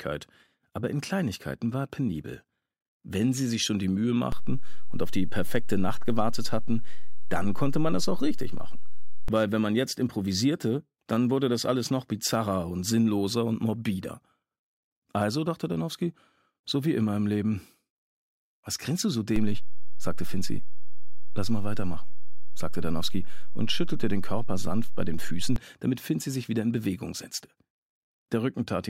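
At 4.32 s the waveform's zero line jumps by about -20 dBFS and holds until 9.28 s; a second DC step, about -19 dBFS, runs from 19.36 to 25.56 s. Each shift and return gives a low thump while the sound continues intact, unlike a dropout.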